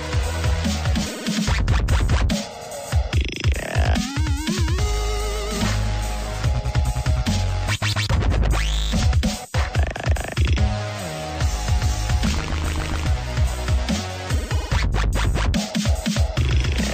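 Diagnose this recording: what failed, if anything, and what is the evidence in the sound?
Nothing failed; no fault is audible anywhere.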